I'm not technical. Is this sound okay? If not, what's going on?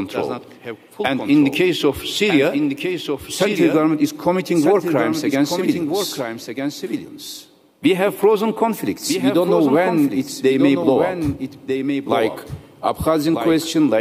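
No. The sound has a doubled audio track: throughout, a second full copy plays about a second and a half behind, a bit quieter. It's not an echo; it never fades or sounds roomy. The likely cause is the audio being captured twice.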